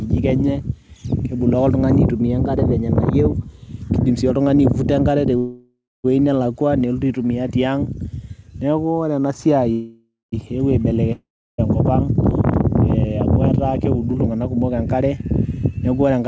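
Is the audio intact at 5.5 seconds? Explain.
No. A call audio freeze runs from 5.38 to 6.06 s: the sound stretches into a fading buzz, then about 0.23 s of silence, likely because packets stalled and the jitter buffer emptied. Unlike a dropout, nothing is lost; the audio resumes where it stopped, 0.66 s late.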